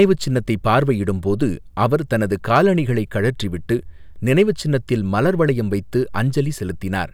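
Hard clipping appears twice, from 0.00 to 0.05 s and from 2.55 to 2.59 s, where the speech overdrives a stage by about 2 dB and about 3 dB. The peaks are sliced flat, giving brief crackles, not the rounded thickening of soft saturation.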